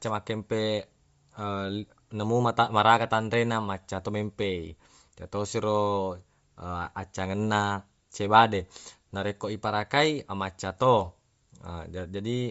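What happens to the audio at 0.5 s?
At 0.5 s the speech carries Bluetooth LC3 compression, present across the whole clip. Nothing sounds above about 7.7 kHz. The top is thin and breathy, with a grainy edge. That likely comes from LC3 coding in 10 ms frames, at a rate near 32 kbps.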